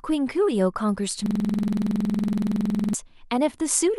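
A system hang loop runs from 1.26 s to 2.94 s. The computer or audio driver stalled while the sound hardware kept replaying its last buffer, so one 46 ms slice of the speech repeats exactly, some three dozen times. That length fits a 2048-sample buffer. Cycling at 21.5 Hz, the frozen fragment comes across as a rapid, rattling stutter rather than a smooth tone, and normal speech returns at 2.94 s.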